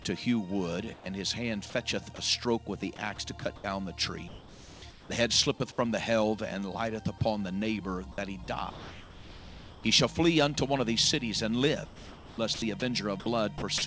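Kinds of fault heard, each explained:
Sound dropped by the voice detector: From 0.94 to 1.06 s the sound gives way to about 120 ms of steady, featureless noise, cutting roughly 50 ms of real sound. The likely cause is the sender's voice detector treating a quiet stretch as background and pausing transmission while the receiver filled in synthetic noise. On a spectrogram the detailed pattern breaks into a smooth, even band. The waveform flattens into low, uniform hash until the sound resumes.
Sound chopped by the voice detector: Between 1.70 and 2.18 s, 3.16 and 3.64 s, 8.44 and 9.84 s, and 11.86 and 13.82 s, the sound repeatedly cuts in and out. About 60, 120, 1180 and 760 ms respectively are replaced by uniform noise. The likely cause is the detector toggling transmission on and off across each stretch. The spectrogram shows alternating blocks of real texture and flat, smoothed noise. The waveform shows abrupt drops to an even low level between bursts.
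Comfort noise in place of the background: From 4.28 to 5.10 s, about 740 ms of the real background is swapped for a bland, constant hiss with none of its original variation. This is likely discontinuous transmission, with the receiver synthesising noise shaped roughly like the background. On a spectrogram that stretch is a uniform, structureless wash, still capped at 8 kHz like the rest of the call path. In the waveform it appears as a steady, unmodulated noise floor.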